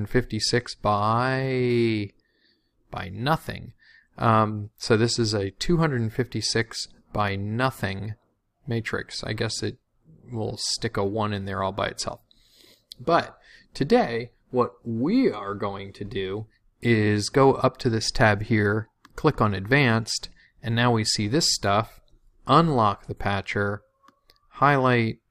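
No technical faults are audible.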